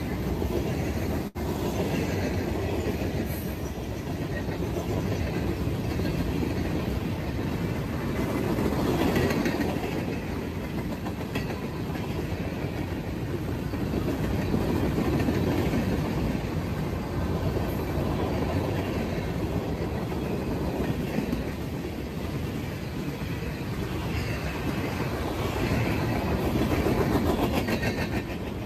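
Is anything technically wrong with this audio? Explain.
Yes. At 1.27 to 1.38 s there is a short stall from a late packet. The jitter buffer ran empty, so the receiver stretched the last sound by 74 ms, then resumed. Nothing is lost.

From 7.0 to 7.89 s a jitter buffer speed-up plays the audio at 105% speed. Small pitch-period pieces, about 50 ms in total, were cut. The sound hurries at unchanged pitch.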